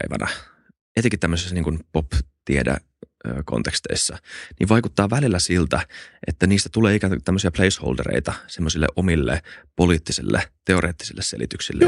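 No technical faults can be heard anywhere in the recording. The speech runs without any break or disturbance.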